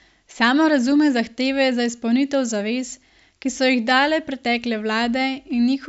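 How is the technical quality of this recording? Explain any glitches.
Listening to the recording, nothing stood out as a technical problem, so there are no glitches to explain.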